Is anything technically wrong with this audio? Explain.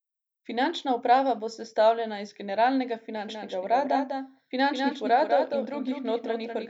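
Yes. From 3.17 s to the end there is a doubled audio track: a full-band copy trails about a fifth of a second behind, a few decibels quieter, likely from a second capture path. Unlike echo, it starts abruptly and has no decay or room colour.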